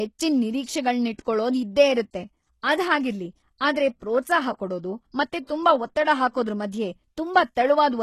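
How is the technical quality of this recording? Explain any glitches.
The recording has plainly audible codec damage across the whole clip.

HE-AAC compression, throughout: the treble sounds likely to come from HE-AAC compression, where only the lower spectrum is actually coded and the upper bands are rebuilt by copying lower content upward under a coarse envelope. Nothing reaches above 12.3 kHz, and the damage is strong enough to suggest a very low bitrate, roughly 16 kbps. Sibilants come out gritty and lispy, with a metallic sheen where the synthesized highs fail to line up with the real harmonics.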